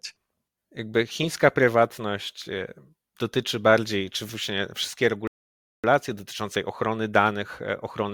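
At 5.27 s the player exhausted its downloaded audio and had to wait for more data, a rebuffering stall lasting until 5.84 s. Right after "bardziej czy właśnie wszystkie" the speech drops abruptly into silence for about 0.56 s, then picks up cleanly with "dotyczące ochrony" from exactly the point where it stopped. No speech is skipped or repeated; the stall simply inserts that gap of dead air into the timeline.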